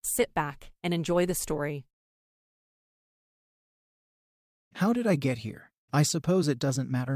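No technical faults can be heard anywhere in the recording.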